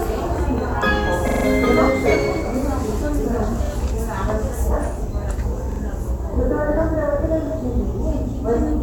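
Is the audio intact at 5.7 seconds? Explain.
No. A repeated buffer runs from 5.72 to 5.80 seconds. New audio arrived late, so the player sent the last 43 ms block out twice more, which fits a 2048-sample buffer. The same piece sounds three times in a row. Each repeat starts with a hard join, heard as a brief stutter.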